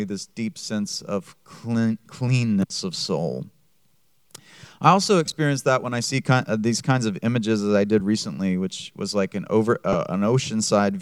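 At 5.26 s, 7.99 s and 9.93 s, lost LE Audio frames break up the sound. The first spreads 37.5 ms of loss over 75 ms, with no gap much beyond 15 ms. The later two each lose 15 ms, which fits two 7.5 ms frames. The LC3 decoder refills each gap with the previous spectrum under random signs, producing a brief noisy smear rather than the hard silence or click of a plain dropout.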